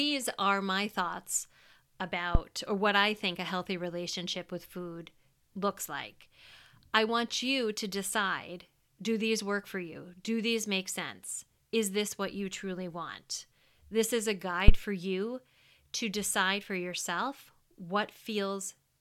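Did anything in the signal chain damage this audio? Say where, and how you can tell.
Yes, in the analogue wiring. Phantom power thumps land at 2.35 s before "or what I think" (peak about -10 dBFS, 13 ms decay) and at 14.68 s between "is a" and "for you to decide" (about -3 dBFS, 24 ms). Each is a supply step pushed through the coupling capacitors.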